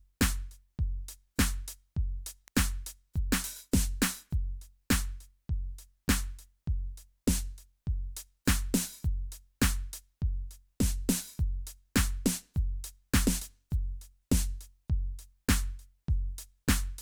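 At 2.48 s, a nearby switch, motor or static discharge likely threw a brief arc that the audio line picked up, producing an electrical switching spike: a single sharp snap laid over the music, fairly quiet at about -30 dBFS and gone almost instantly.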